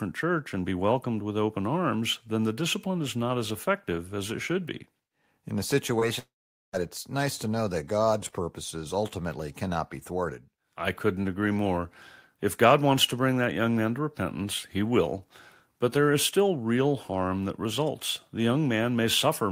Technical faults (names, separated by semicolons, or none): short concealed packet loss; long network dropout